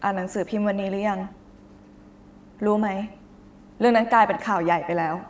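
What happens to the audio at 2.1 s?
Echo with no canceller is present at 2.1 s and throughout the clip. The far end's loudspeaker feeds its microphone and nothing removes it, so the speech returns about a tenth of a second later as a thinner shadow, about 16 dB quieter.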